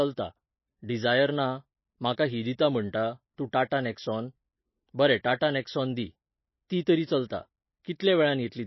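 Throughout the speech, the audio has nothing above about 5.8 kHz, so s sounds lose their edge. Likely MP3 compression at a low bitrate, near 22 kbps, strips the treble. It zeroes weak frequency lines that flicker between frames. The damage is plainly audible. It sounds watery and swirly, with smeared attacks.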